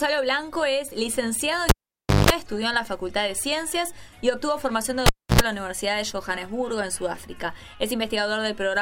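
Cable pulled and plugged in at 1.69–2.30 s: a pop, about 0.56 s of near silence, then 50 Hz mains buzz for 0.19 s while only the plug tip touches, and a second pop as the sound returns. It happens again at 5.06–5.41 s, with a 0.30 s dropout and a 90 ms burst of 60 Hz buzz.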